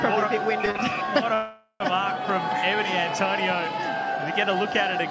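Packets arriving late kept draining the jitter buffer between 0.66 and 1.10 s, so this audio, carried over a wideband call codec with nothing above 8 kHz, suffers repeated stalls (stutter): four short held-over gaps, the longest about 39 ms, make it drag without losing anything. A longer hold-up, likely packets delayed in transit, then causes a call audio freeze from 1.34 to 1.82 s, where the last sound is stretched as a fading fill for about 465 ms, ending in roughly 80 ms of silence before playback resumes where it stopped.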